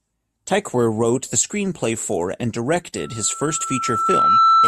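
Speech, with loudspeaker feedback squeal from 2.97 s to the end. A single 1.3 kHz tone swells over roughly one and a half seconds to about 10 dB above the speech. It rises because the microphone is re-amplifying its own loudspeaker, whereas an interfering tone would start at full level.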